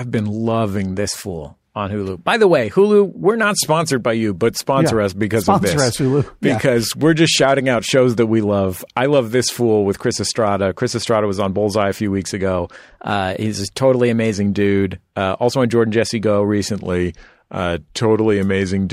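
Speech jumps about a semitone sharp and 6% faster from 0.94 to 3.43 s and again from 12.83 to 14.33 s, then drops about a semitone flat and 6% slower from 16.77 to 18.92 s. Each is likely a drift correction step, where clock-matching software abruptly changed the playback rate.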